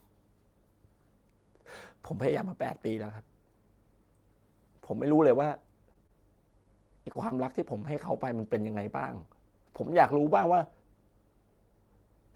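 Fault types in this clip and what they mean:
scattered short gaps: packet loss concealment at work in this speech between 5.93 and 7.88 s, where around seven small holes, none longer than about 30 ms, were filled by extending the preceding sound, leaving brief ticks and smeared hiccups across a few percent of that stretch.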